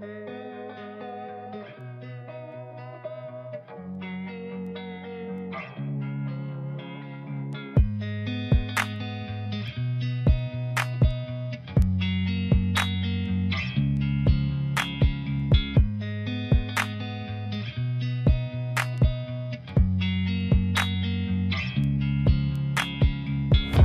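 From 0.38 s to 23.27 s, sharp ticks recur at a steady rate of about one every 0.7 s, some thirty in all. Their strength varies from tick to tick. These are word clock ticks. The receiving device runs on its own clock, not locked to the sender's. The two drift apart by roughly 30 parts per million. Each time they slip past each other, a single sample is dropped or repeated, and the glitch clicks.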